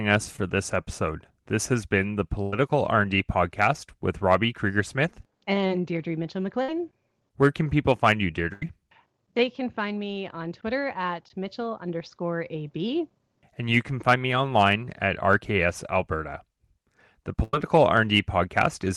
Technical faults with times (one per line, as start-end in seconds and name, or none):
0.36-0.39 short concealed packet loss
2.42-2.53 burst of packet loss
6.62-6.69 burst of packet loss
8.53-8.62 burst of packet loss
17.43-17.54 burst of packet loss